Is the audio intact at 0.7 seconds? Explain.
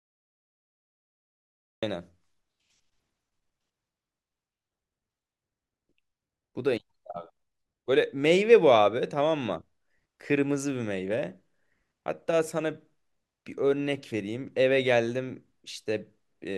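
No. At 0.7 seconds you're inside a cut-off start: the stream started late, so the first 1.83 seconds are just digital silence. Then at 1.83 s the speech drops in already mid-sound, with no natural attack or fade-in.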